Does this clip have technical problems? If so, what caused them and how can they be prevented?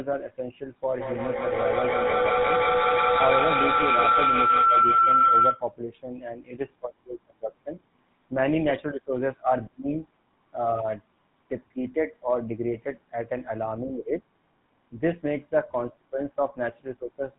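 Yes. From 0.9 to 5.72 s a feedback howl rises to about 6 dB above the speech, a ringing tone around 1.5 kHz that pulses roughly every 150 ms. Two devices in one room on the same call form a loop that gains level on every round trip, so the repeats grow, narrow to the pitch the loop favours, and hold until the loop breaks. Muting all but one device in a shared room, or using headphones, prevents it.

Throughout, the speech has a buzzy, gravelly roughness with nothing above 4 kHz, the mark of the GSM full-rate codec, at a rate that fits a 13 kbps stream. It rebuilds the voice from a vocal-tract model driven by regularly spaced pulses, discarding much of the excitation detail. Sending the call over a wideband codec instead of legacy GSM avoids this.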